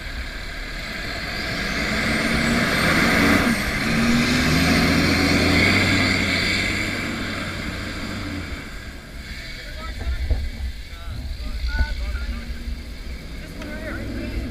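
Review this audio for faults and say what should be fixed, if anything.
Damaged data in a compressed stream occurs at 1.05, 3.86, 8.18 to 8.20, 11.59 and 13.91 s. Corrupted bytes make the decoder misread frames and lose sync, leaving a brief disturbance of about 20 ms or less while it finds the next valid frame header. Preventing it requires checksummed transport and verification of the file against its source before decoding.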